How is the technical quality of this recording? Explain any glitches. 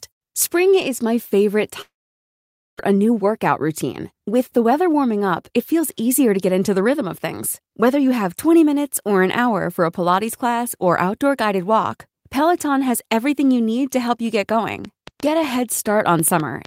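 Three glitches affect the technical quality of this speech recording.

Long network dropout, 1.81 to 2.81 s: likely packet loss leaves a fading buzz, then about 0.88 s of flat, empty waveform; 0.6 s of speech never returns.

Jitter buffer speed-up, 2.89 to 7.8 s: the receiver trims pitch-period slices, roughly 0.4 s in total, so speech runs 107% fast at unchanged pitch. Spectrogram shows compressed syllables.

Train of clicks, 14.49 s to the end: irregular ticks, about 4.9 per second and about 5 dB above the speech, appear as thin vertical spikes on the spectrogram.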